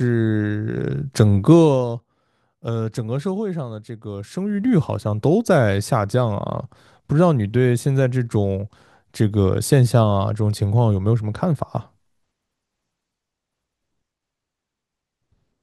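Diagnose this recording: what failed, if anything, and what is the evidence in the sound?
Zipper noise at 1.51 to 1.88 s and again at 4.25 to 4.78 s, introduced at the buffer stage where gain is applied. In the first span the level drops by roughly 10 dB; in the second it rises by roughly the same amount. Each move is made in 1 dB jumps, about thirty a second and then about twenty a second, applied once per buffer without interpolation. Every jump leaves a tiny click, and the series of clicks rides on the speech as a ticking zip while the level moves.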